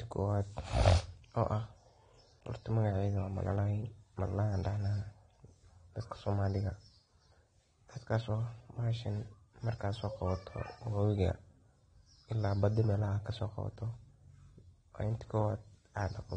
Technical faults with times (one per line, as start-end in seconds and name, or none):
0.00-16.36 AAC compression